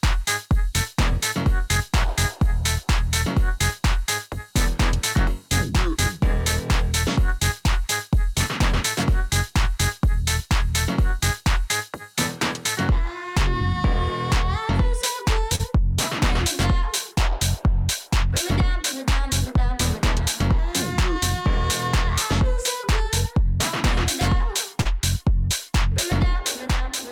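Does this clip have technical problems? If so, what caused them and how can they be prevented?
Yes. Short concealed packet loss at 15.55–15.61 s and 24.81–24.87 s: about 40 ms of data arrived too late, and the receiver filled each gap by extending the preceding sound, leaving a brief smear or wobble. A larger jitter buffer or forward error correction on the link would help prevent it.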